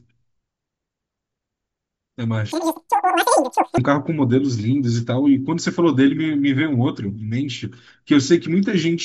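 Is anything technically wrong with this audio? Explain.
Yes. From 2.52 to 3.78 s there's a wrong sample rate fault: the speech runs 2.76 times too fast and jumps about 17.6 semitones, which fits 16 kHz audio played at 44.1 kHz.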